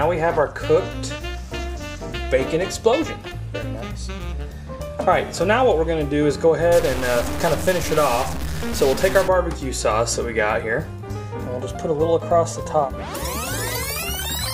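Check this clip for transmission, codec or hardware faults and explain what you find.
One hardware fault is present. From 6.72 to 9.28 s the audio turns harsh and buzzy, with a gritty noise floor under quiet passages. This points to a stuck bit, likely a data line held at a fixed value, offsetting roughly half the samples by a step of about -25 dBFS.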